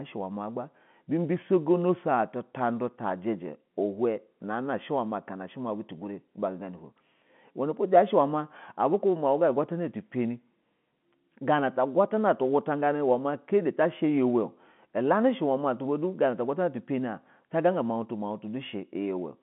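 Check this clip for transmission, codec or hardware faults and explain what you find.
No transmission, codec or hardware faults are audible here.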